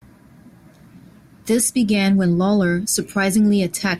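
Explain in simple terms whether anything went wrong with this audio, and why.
Nothing in the speech stood out as a problem on listening; no glitch, break or change in the sound caught the ear at any point.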